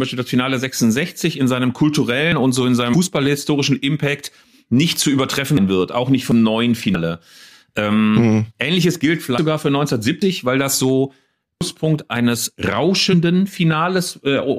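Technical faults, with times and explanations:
2.32 s, 5.57 s, 6.32 s, 9.38 s, 10.22 s and 11.61 s: dropped buffer (overrun). Each is an abrupt jump forward with no silent gap. At 2.32 s it falls between "in seinem" and "und so in", at 5.57 s between "nicht zu übertreffen" and "wird auch nicht", and at 10.22 s just before "weil das so". Roughly a tenth of a second is lost at 2.32 and 10.22 s, about a fifth at 5.57, 6.32 and 9.38 s, and nearly a third at 11.61 s. The likely cause is samples that weren't read before the hardware overwrote them, so the surviving audio on either side is spliced straight together.
2.93 s, 6.95 s and 13.12 s: damaged data in a compressed stream. Each is a brief chirp or blip, under 20 ms long. Corrupted bytes in the encoded stream make the decoder misread those frames and lose sync, so it emits garbled output while it searches for the next valid frame header. 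Normal decoding resumes almost immediately, which is why each disturbance is so short.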